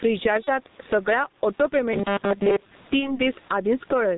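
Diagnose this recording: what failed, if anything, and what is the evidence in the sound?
The speech has gain pumping from start to end. The room noise sits far under the speech, about 39 dB down. The level swings by roughly 15 dB. Loud and quiet syllables end up squashed together. The stage is call processing at the microphone. The likely cause is input gain set far too high, with a fast limiter clamping every peak.

The whole clip is coded with G.723.1 at 6.3 kbit/s, and the damage is heavy. The sound is muffled. Nothing survives above 4 kHz. The voice is hoarse and consonants smear together. The stage is the codec. It works in 30 ms frames and updates its model of the voice slowly, so fast changes in the speech blur.

VoIP packet loss concealed by the speech codec happens twice, each time one 30 ms frame. The first runs from 0.44 to 0.51 s, just before "सगळ्या ऑटो". The second runs from 2.99 to 3.21 s. 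In both, the decoder stretches its last pitch and filter into a fading buzzy tone or coloured noise. Each frame is built on the one before, so the voice stays weak well past the gap. The stage is the network.

Robotic sound from repeated short buffers runs from 1.93 to 2.75 s, right after "सगळ्या ऑटो". The speech turns into a rigid metallic buzz at 200 Hz that only loosely follows the syllables. That pitch fits a loop of about 5 ms played over and over. Most of the audio in that stretch is repeats, and the real sound is skipped. The stage is the driver or buffer, with the likely cause being new audio arriving too seldom.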